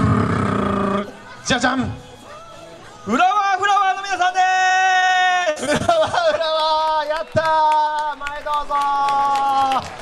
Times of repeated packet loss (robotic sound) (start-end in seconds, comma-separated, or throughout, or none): 4.67-5.90